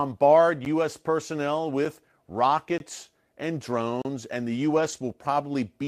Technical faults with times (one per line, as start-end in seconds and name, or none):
0.65 block of digital silence
1.85 block of digital silence
2.78-2.80 block of digital silence
3.71-3.73 lost packet rebuilt from error correction
4.02-4.05 block of digital silence
4.76-5.06 lost packet rebuilt from error correction